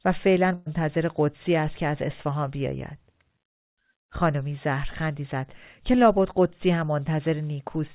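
Speech clip over a phone-band call path that tops out at 4 kHz. The one fault is a burst of packet loss from 0.54 to 0.68 s: about 120 ms was lost or came too late to play, the receiver stretched and faded the last sound to cover it, and the speech picks up later with that stretch missing.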